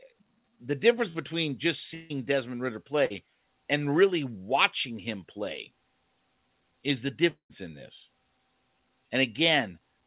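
At 1.1 s there is a short concealed packet loss. About 40 ms of speech never reached the decoder in time. The receiver extended the preceding sound across the gap, so there is a brief smear. The same thing happens again at 3.06 s.

From 1.94 to 2.12 s the speech turns into a fading buzz or hiss and then resumes with about 160 ms gone. A long network dropout is the likely cause. It happens again from 7.30 to 7.52 s. This time 200 ms is lost and the last 100 ms is silent. All of this sits in narrowband call audio with nothing above 4 kHz.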